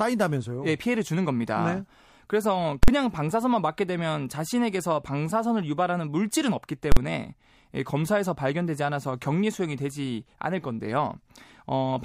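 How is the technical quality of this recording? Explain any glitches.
The recording is marred by two loud bangs in the speech, at 2.83 s and 6.92 s, both caused by invalid numbers at full scale. Each lasts about 46 ms, which fits a 2048-sample processing block. A calculation produced infinite or invalid values, and the output pinned to its extreme for the entire block. Because the burst is so short, it lands as a single harsh bang. Ordinary clipping sounds different: it flattens only the peaks of a loud signal, while here the whole block is replaced outright.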